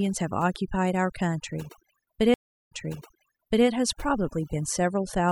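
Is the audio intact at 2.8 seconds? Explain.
No. Between 2.34 and 3.66 s the stream connection dropped, the player went quiet while it reconnected, then started a fresh decoder partway through the stream. That stream reconnect leaves a gap of about 355 ms of silence, and when the sound returns it has jumped back roughly 0.97 s. The server resent a burst of earlier material, so the listener hears a stretch of speech repeated right after the dropout.

Overdone noise removal also affects the audio at 2.8 s, as it does across the whole clip. The noise reduction was set so aggressively that frequency bands sitting near its noise estimate get pulled far down or switched off entirely, taking the quieter parts of the speech with them. Around this moment the background is pushed down and sprinkled with twinkling specks.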